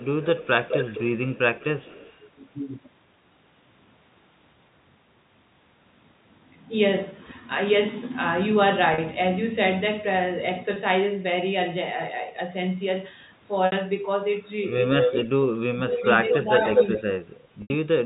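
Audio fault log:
0.0 to 2.24 s, 15.0 to 15.31 s and 15.91 to 17.02 s: echo leak. A delayed copy of the speech returns about 0.21 s, then 0.23 s, after the original. It starts faint, roughly 10 dB down. Later it matches the speech, then exceeds it. The likely cause is a loudspeaker whose pickup the echo canceller failed to remove.
0.43 s, 15.67 to 16.67 s and 16.99 to 18.06 s: speech suppressed in double talk. The speech dips while other sound overlaps it. The dip is slight at first and deepens to about 20 dB, then about 35 dB. The echo canceller likely could not tell the talker from the echo and turned both down.
8.94, 10.74, 13.66 and 17.62 s: packet loss with pitch repetition. Gaps of 40, 20, 60 and 80 ms are bridged by repeating the last pitch period. This fits 20 ms packets. The short gaps sound buzzy and held. The longer ones fade toward silence before the speech resumes.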